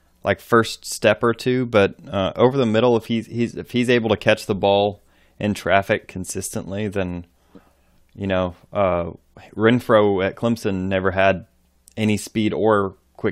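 Nothing in the speech stood out as a technical fault on listening.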